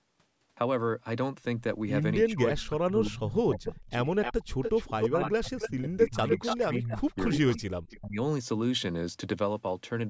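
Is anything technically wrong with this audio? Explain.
Yes. The speech repeatedly drops away while the other side of the call is talking, and a delayed copy of the speech comes back through the line.

Speech suppressed in double talk: between 2.26 and 3.91 s, and again between 4.92 and 8.18 s, the speech sinks, at worst by roughly 30 dB and then 25 dB, over about one and a half and then two seconds in total. This is likely an echo canceller muting both talkers during overlap.

Echo leak: a faint, delayed repeat appears at 2.27–2.68 s (344 ms delay, about 25 dB down) and 3.55–3.59 s (288 ms, about 15 dB down). It grows strong at 4.22–5.69 s and 6.30–7.98 s (288 ms, about 5 dB down). This is likely loudspeaker pickup that the far end's canceller failed to remove.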